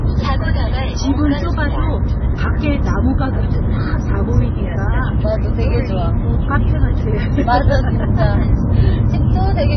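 From start to finish the audio carries heavy coding damage, most likely MP3 compression. Nothing is present above 6.1 kHz, where the encoder has cut the treble to save bits, so the sound is dull and closed in. With so few bits available, weak frequency lines are dropped and restored from frame to frame, producing a watery, swirling texture and smeared attacks. This degree of damage points to a very low bitrate, around 16 kbps.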